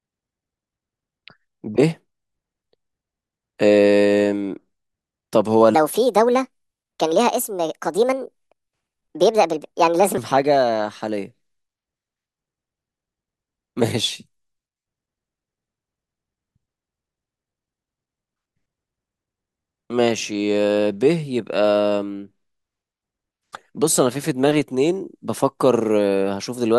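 A section at the wrong speed runs from 5.75 to 10.18 s, where the speech plays 1.44 times faster than it was recorded. Because speed and pitch move together, the voice jumps up by roughly seven semitones and sounds hurried and chipmunk-like, then drops back to its natural pace and pitch at 10.18 s. The likely cause is this stretch being played or resampled against the wrong clock rate.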